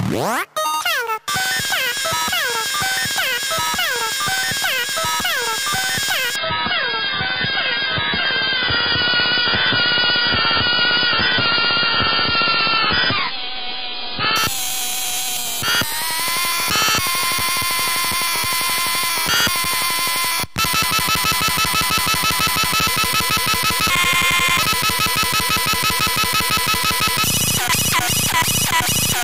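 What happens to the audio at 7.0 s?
At 7.0 s the audio is inside a stretch of adaptive stream at a lower bitrate, running from 6.36 s to 14.36 s. The player switched abruptly, with no gap, to a far leaner encode. The dullness and swirly artefacts fit a drop from roughly 96 kbit/s to about 12 kbit/s. Treble vanishes and sound turns watery. On a spectrogram, energy above 5.1 kHz cuts off sharply across that span. The waveform stays continuous.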